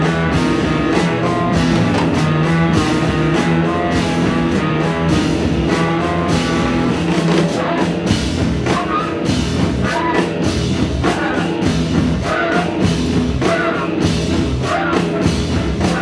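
No technical faults can be heard anywhere in the clip.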